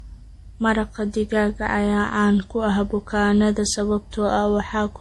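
Transcoding between lossy codecs throughout this speech clip: nothing sounds above 11.8 kHz and layered artefacts point to MP3 then Opus near 48 kbit/s, likely stacking both artefacts.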